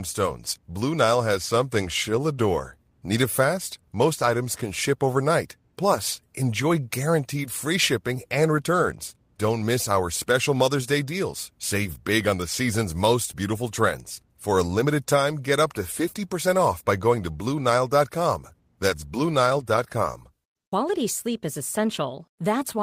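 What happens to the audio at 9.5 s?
Nothing goes wrong at 9.5 s; the speech runs through that moment intact, with no dropout, click or other fault.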